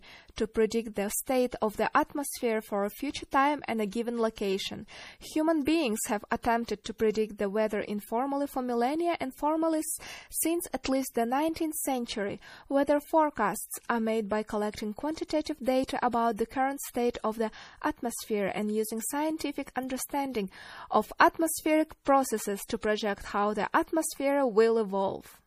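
A speech recording that has likely been through heavy MP3 compression: the encoder, starved of bits in a way that fits a low rate around 40 kbps, discards everything above 15.2 kHz and drops weak frequency lines frame by frame, leaving plainly audible watery, swirling damage and dull highs. A pre-echo appears at 10.84 s: the quantisation noise of one transform block spreads about 16 ms ahead of a sharp onset, so a brief hiss precedes that attack and softens it.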